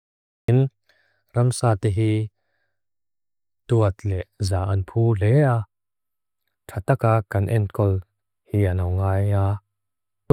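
The clip opens with a cut-off start. The first 0.48 s is pure digital silence, and at 0.48 s the speech appears abruptly, already mid-sound, with no natural attack or fade-in leading into it. That hard edge means capture or streaming began late, after the talker had started, so the onset of that sound was never recorded. The transition from silence to signal is a step rather than a rise.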